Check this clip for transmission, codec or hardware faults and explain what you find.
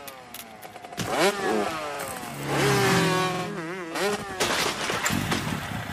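Three stutters point to a repeated buffer fault, at 0.37 to 0.42 s, 1.95 to 2.00 s and 3.34 to 3.44 s. New audio arrived late, so the last block of about 46 ms, which fits a 2048-sample buffer, played again: once at the first two points and twice at the third. Each is heard as a brief stutter with hard joins. A waveform shows identical adjacent blocks, and a spectrogram shows a repeated pattern with vertical seams at each join.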